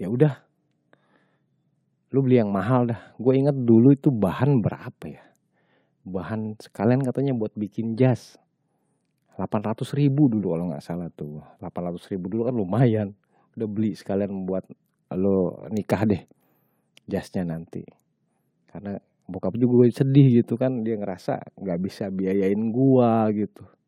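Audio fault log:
Listening across the speech recording turns up no faults. There is nothing here that needs an entry with a time or range.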